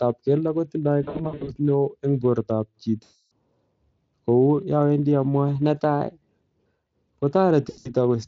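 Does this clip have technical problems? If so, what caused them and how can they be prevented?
Yes. VoIP packet loss concealed by the speech codec breaks up the speech three times. From 1.03 to 1.56 s, short gaps adding up to about 280 ms, the longest 60 ms, are spread across 440 ms. From 3.04 to 3.32 s, about 280 ms is lost. From 7.69 to 7.90 s, about 140 ms is lost, with one 80 ms run. In each case the Speex decoder repeats its last pitch and filter at falling gain. The speech stretches into a fading buzz or coloured noise and stays weak briefly after packets return. A larger jitter buffer or forward error correction on an unstable link would prevent it.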